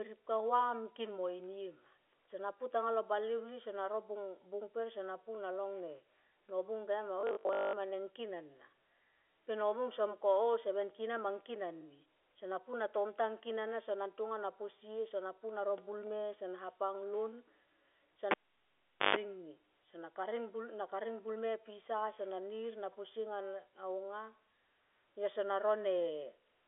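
From 7.21 to 7.75 s, the sound turns robotic, with a rigid metallic buzz at 50 Hz. This is robotic sound from repeated short buffers. The likely cause is audio arriving too seldom, so the software loops the last fragment to fill the gap. A 50 Hz buzz fits a repeated span of about 20 ms. Most of the real audio in that stretch is skipped. The buzz still loosely tracks the speech.

At 18.31 s, a cable is pulled and plugged in. A pop opens the fault. The cable is out for about 0.8 s, mostly near silence. Within that, 50 Hz mains buzz bursts in for about 133 ms as the plug half-seats. A second pop marks the return of sound at 19.16 s. The G.711 telephone band tops out near 3.7 kHz.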